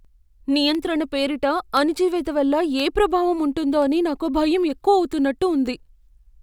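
Periodic USB or driver dropouts run from 0.75 s to 5.87 s, recurring every 1.02 s, roughly seven in all. At each one a background task stalls the USB bus or audio driver, and a tiny sliver of the speech, only a fraction of a millisecond, is dropped and replaced with silence. The abrupt gap breaks the waveform, so each event is heard as an evenly timed tick that is only audible while speech is present.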